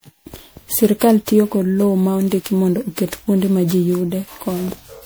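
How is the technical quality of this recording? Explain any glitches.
The recording is impaired by generation loss, heard from start to finish. The speech sounds swirly, hollow and smeared, with consonant attacks blurred. This is likely repeated lossy re-encoding, around ten passes, fitting MP3 at roughly 128 kbit/s. Each pass requantises on a shifted frame grid, so noise and spectral gaps accumulate.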